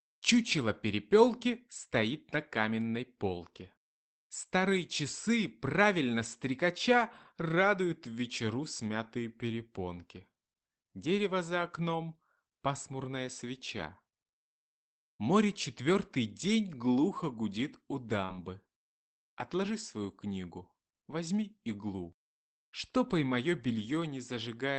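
At 18.25 s a short concealed packet loss lasts about 0.05 s. Roughly 40 ms of audio arrived too late to decode, and the receiver bridged about 32 ms of it by extending the preceding sound before blending back, leaving a brief smear across the speech.

Overlapping it from 18.29 to 18.43 s is a lost packet rebuilt from error correction. About 80 ms, apparently spread over several separately lost packets, was replayed from Opus's low-bitrate redundant copies, so the audio continues without a gap but sounds audibly rougher and noisier, within the call path's 8 kHz bandwidth.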